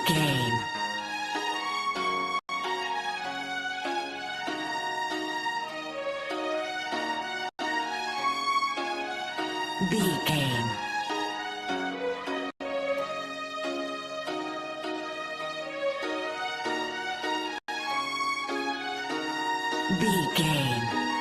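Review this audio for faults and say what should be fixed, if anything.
There's a gap between chunks problem: four holes, each 100 ms long, at 2.39–2.49, 7.49–7.59, 12.5–12.6 and 17.58–17.68 s. They land about every 5 seconds, so the audio was handled in 5-second chunks and silence got inserted at each join. Nothing is missing, it just stops and restarts at each join. To fix it, strip the padding and queue each chunk so it starts exactly when the previous one ends.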